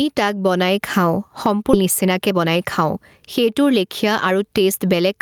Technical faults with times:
0.00-5.21 gain pumping
1.73-1.75 skip ahead
1.83-2.97 jitter buffer speed-up
3.39-5.15 jitter buffer speed-up

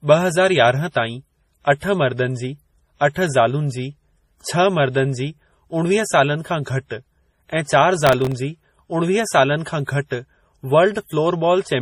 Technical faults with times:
0.00-11.82 transcoding between lossy codecs
8.07-8.32 processor overload crackle

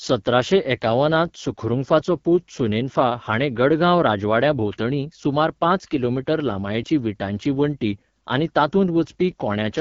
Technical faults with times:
0.00-9.80 AMR wideband (HD Voice) codec

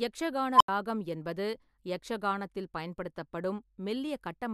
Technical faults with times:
0.54-0.68 unstable filter

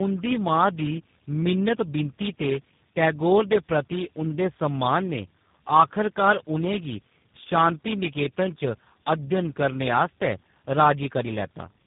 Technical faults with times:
0.00-11.86 tandem speech coding

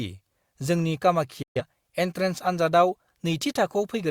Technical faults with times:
1.42-1.62 digital broadcast dropout

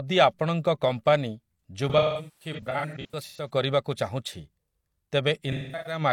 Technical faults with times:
1.89-3.49 AAC frame loss with concealment
5.51-6.01 AAC frame loss with concealment

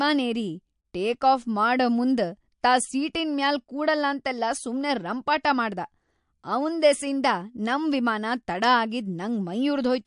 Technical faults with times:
0.00-10.06 MP3 compression

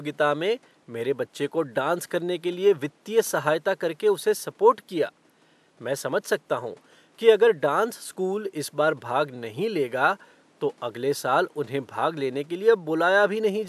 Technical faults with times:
none

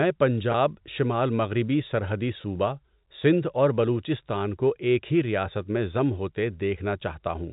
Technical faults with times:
0.52-0.54 packet loss with pitch repetition
2.42-2.44 packet loss with pitch repetition

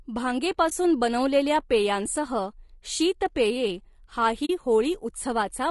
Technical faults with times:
0.00-5.71 low-delay AAC compression
0.69-0.72 AAC frame loss with muting
4.45-4.50 AAC frame loss with muting

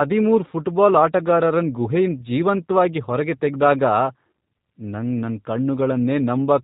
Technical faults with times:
0.00-6.64 G.729 codec

